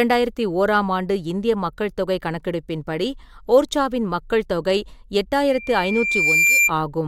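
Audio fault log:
5.47–6.72 s, loudspeaker feedback squeal: a single tone at 2.4 kHz swells over roughly one second to about 5 dB above the speech, as the microphone re-captures its own loudspeaker and that frequency's loop gain exceeds one. A spectrogram shows one bright horizontal line thickening; the waveform envelope climbs steadily.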